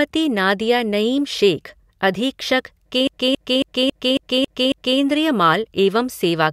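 A speech recording that locks into a CD stuck on one turn from 3.07 s to 4.99 s. A slice of about 0.27 s repeats seven times with a brief mute at each jump, the even stutter of the laser skipping back one track at a scratch on every revolution.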